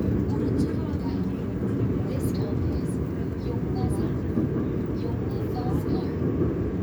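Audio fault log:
No fault can be heard in this recording of sounds. There is nothing to log against any time.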